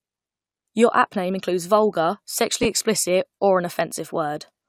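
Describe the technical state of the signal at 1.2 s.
At 1.2 s the speech signal is intact, with no audible technical fault at that moment.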